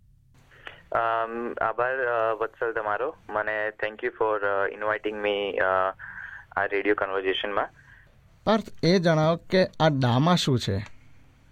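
No audible faults at any point in the clip.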